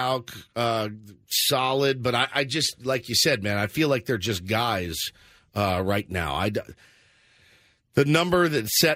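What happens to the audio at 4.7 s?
Nothing goes wrong at 4.7 s; the speech there plays through intact, with no dropout, click, distortion or other fault.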